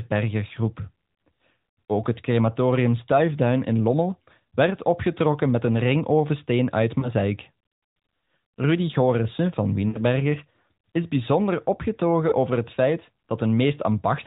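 Lost AMR speech frames occur at 7.00–7.13 s after "met een ringovensteen uit", at 9.88–10.00 s, and at 12.30–12.34 s before "over het feit". The first and last sound like a single missing 20 ms frame, and the middle one like a 60 ms run of about three. The decoder covers each gap by repeating the last good frame's pitch and vocal tract settings at falling gain. The single-frame gaps are heard as a brief warble or dip, and the middle run as a drawn-out, fading sound. On a waveform the envelope sags, and on a spectrogram the harmonics smear flat, under the 4 kHz ceiling of the narrowband AMR codec.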